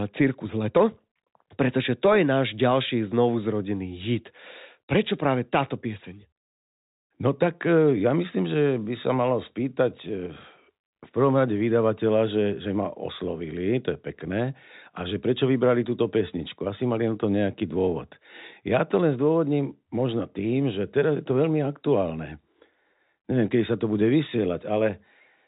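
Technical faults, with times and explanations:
No faults found in this speech, which carries the band-limited character of G.711 mu-law telephone coding with nothing above 3.8 kHz, consistent with a 64 kbps line.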